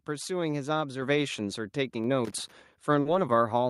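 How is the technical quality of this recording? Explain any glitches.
The recording has three distinct technical faults, spaced across the speech.

At 1.02 s the microphone volume steps up by about 4 dB. The call software judged the input too quiet and raised the device gain in a single jump, so voice and background noise both become louder at once, mid-stream.

From 2.25 to 2.52 s there is loose connector crackle. A worn or dirty contact makes and breaks intermittently, chopping the signal and adding pops from any DC on the line. It comes through as an irregular scratchy burst lasting about a quarter of a second.

At 3.01 to 3.07 s a short concealed packet loss occurs. About 40 ms of audio never arrived in time, and the decoder synthesised a stand-in by extending the preceding sound before blending back into real audio. The result is a brief smear or wobble in the speech.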